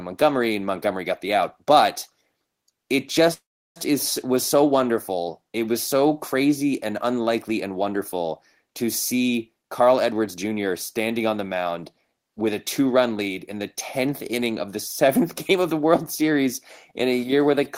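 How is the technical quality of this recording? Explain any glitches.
The recording has two timing faults.

From 3.33 to 3.78 s, just before "is was so wonderful", there is a call audio freeze. Packets were likely delayed and the jitter buffer ran dry. The receiver stretched the last sound briefly and then went silent for about 340 ms. The speech resumes intact, but roughly 0.42 s later than it should.

From 9.35 to 10.66 s, between "unlikely and wonderful to" and "standing on the mound", there is a jitter buffer speed-up. The buffer had built up excess delay, so it trimmed tiny pitch-period slices, around 150 ms in total. The speech plays about 9% faster at unchanged pitch and sounds hurried.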